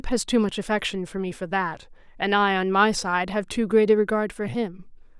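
A short recording of speech, with nothing technically wrong to be heard in it. No fault turns up at any point, so there are no times or causes to give.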